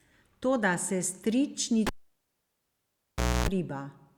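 Speech, interrupted by a cable pulled and plugged in between 1.87 and 3.49 s. A pop at 1.87 s is followed by near silence for about 1.57 s while the lead is out. On reinsertion, 60 Hz mains buzz lasts about 0.28 s as only the plug tip makes contact, and a second pop brings the signal back. The pops and the buzz show a physical connector fault rather than a digital dropout, which would cut out cleanly with neither.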